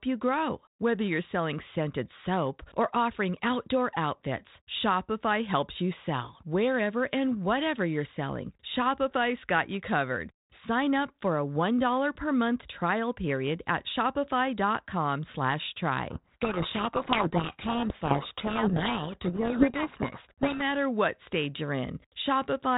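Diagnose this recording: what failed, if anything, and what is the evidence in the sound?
Codec stage: a codec payload misread buries the speech in harsh distortion from 16.10 to 20.63 s, before "what stage". G.726 code words arrive in mismatched bit order.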